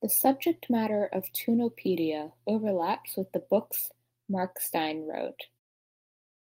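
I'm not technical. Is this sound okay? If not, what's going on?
Yes, this sound is okay; the way it gently gets quieter around 5.5 to 5.6 seconds is just a smooth fade-out at the end.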